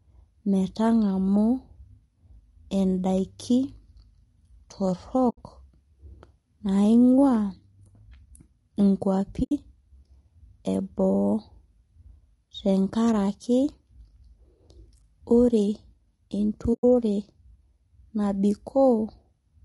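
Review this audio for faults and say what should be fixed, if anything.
The speech sounds rough and grainy the whole way through, with a hiss-like fill between the harmonics and a thin, synthetic top end. That's plainly audible, and it's most likely low-delay AAC compression, AAC-ELD as used in video calls, running at a bitrate somewhere around 32 kbps. Its short frames can't resolve the pitch harmonics cleanly and eat bits, so at a rate like that the detail smears into noise. To prevent it, give the call codec more bitrate or switch to a longer-frame mode when low delay isn't critical.

There are three soft-edged dropouts where the sound fades out and back in: 5.29 to 5.38 s, 9.43 to 9.52 s, and 16.73 to 16.84 s. That's AAC frame loss with muting. The decoder zeroes the missing frames' spectrum, and the overlapping windows smooth the edges. The gaps run about 80 ms, 80 ms and 100 ms, which fits four or five lost frames each time. 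To prevent it, add packet loss concealment or redundancy/FEC on the transport.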